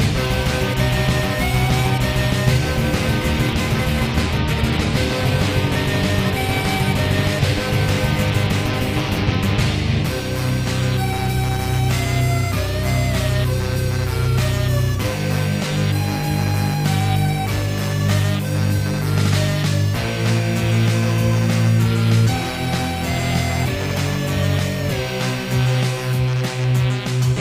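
Adaptive stream at a lower bitrate from 3.85 to 7.85 s: the player switched to a leaner encoding when the connection slowed, and the sound abruptly turns duller and more artefact-laden, with nothing above 14.9 kHz and synthetic treble pointing to roughly 24 kbit/s HE-AAC.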